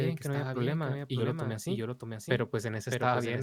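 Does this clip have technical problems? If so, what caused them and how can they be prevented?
Yes. A doubled audio track runs through the whole speech clip. A second full-band copy trails the original by about 0.7 s at roughly 5 dB lower level, with no decay or room colour, so it sounds like a clean, detached repeat rather than an echo. It most likely comes from the same signal being captured twice, once via a slower path, or from an edit leaving two offset copies. To prevent it, route the source through a single capture path and check for duplicate tracks before export.

Compressed frames were skipped at about 1.2 s, between "no había problema y" and "lo tomé". Roughly 30 ms of audio is missing, and the timing points to a few 10 ms codec frames being lost from the file or discarded by the decoder as damaged. To prevent it, use reliable storage or transport with error protection and verify file integrity before decoding.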